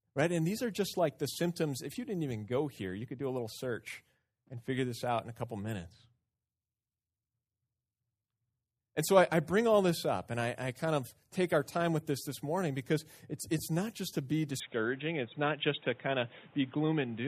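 At 14.6 s, just after "not just to be", the speech abruptly turns dull and boxy through to the end, with nothing above 3.8 kHz, a faint new noise floor and no gap. This is likely an input switched to a poorer device.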